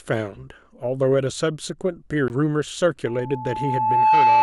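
At 2.28 s the speech cuts out for about 20 ms, then resumes from a different point, a CD skip. A knock or a disc flaw threw the laser onto another turn of the spiral, so playback lost its place.

From 3.06 s to the end, a single steady tone near 871 Hz swells over about a second into a squeal around 10 dB louder than the speech. This is loudspeaker feedback squeal: the microphone picked up its own loudspeaker, and at that frequency the loop's gain exceeded one.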